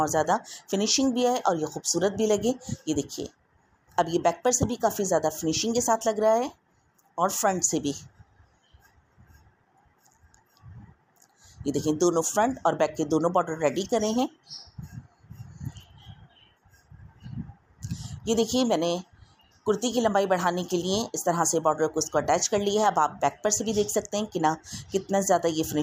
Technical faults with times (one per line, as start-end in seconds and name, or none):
none